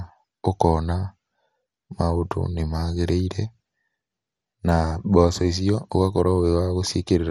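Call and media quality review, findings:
Throughout: dull speech, nothing above 15.1 kHz, gurgling granular distortion. Likely MP2 compression: bit-starved sub-bands switching off and coarsely quantised, consistent with roughly 64 kbps.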